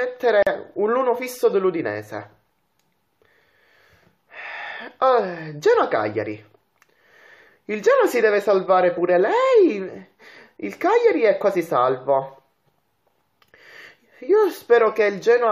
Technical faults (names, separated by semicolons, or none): gap at a join of encoded pieces